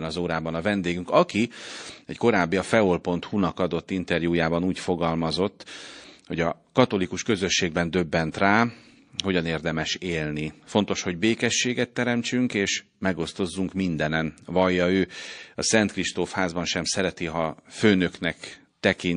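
From start to finish the speech carries plainly audible MP3 compression damage, likely from encoding at a low bitrate. The sound fits something near 40 kbps. With bits this scarce, the encoder has dropped weak spectral lines that flicker on and off between frames. The result is a watery, swirling texture, with metallic chirps on s sounds and softened consonant onsets.

At 8.32 to 8.34 s a pre-echo appears as a brief hiss, about 23 ms long, arriving just ahead of a sharp attack. The noise floor in that gap rises by about 14 dB. The encoder has spread quantisation noise across a long transform block, and the noise budget set for the loud onset has leaked into the quiet moment before it. The smearing suggests a block of roughly 52 ms with no switch to short blocks, so the attack itself sounds blunted.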